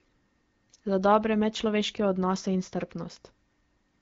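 No technical faults can be heard in this speech, which carries the character of an AMR wideband (HD Voice) codec.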